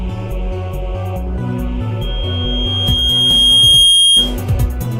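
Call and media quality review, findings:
Loudspeaker feedback squeal, 2.01–4.36 s: 3.2 kHz tone swelling over about two seconds to roughly 10 dB above the signal. Acoustic loop from speaker into mic, with loop gain above unity.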